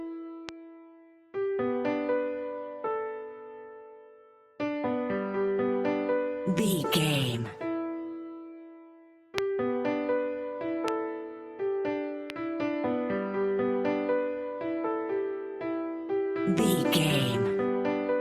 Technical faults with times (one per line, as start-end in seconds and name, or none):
0.49-0.51 loud pop
9.38-9.40 loud pop
10.88-10.90 loud pop
12.30-12.32 loud pop